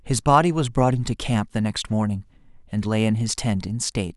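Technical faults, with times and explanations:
The speech signal shows no technical faults at any point.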